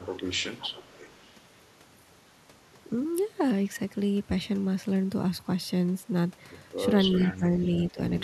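From 0.0 to 1.34 s there is an echo leak. A faint delayed copy of the speech trails the original by 368 ms, sitting roughly 20 dB below it. It sounds like a distant repeat behind the talker. The likely cause is a far end on a loudspeaker whose echo canceller let part of its microphone pickup through and sent it back. The same 368 ms echo returns briefly from 7.12 to 7.37 s.

Speech suppressed in double talk follows, overlapping that second echo. From 7.18 to 7.73 s, and again from 7.92 to 7.99 s, the voice dips by up to around 10 dB. The dips last just under half a second in total. This is likely an echo canceller that could not tell the talker from the returning echo while both were active, so it turned everything down.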